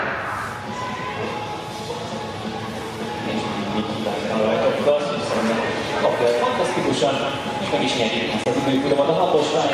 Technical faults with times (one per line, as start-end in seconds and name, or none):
5.33 block of digital silence
8.44-8.46 block of digital silence